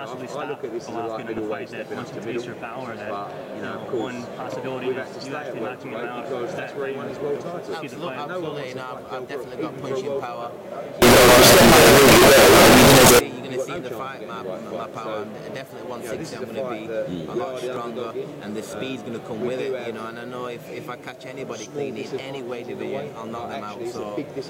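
Signed and unsigned mixed up, 11.02 to 13.19 s: loud, harsh distortion throughout, likely from a flipped top bit turning each zero crossing into a full-range jump.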